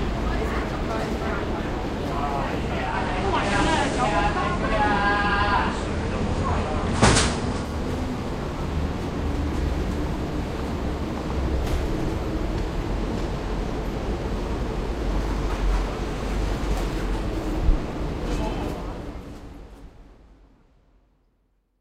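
At 2.83 s the receiver loses its digital stream and blends to the FM analogue broadcast of the same station, returning to digital at 7.75 s. Each cross-fade takes about 167 ms. During the analogue stretch the level shifts by about 2 dB, and a steady FM hiss sits roughly 30 dB under the programme until the digital path returns.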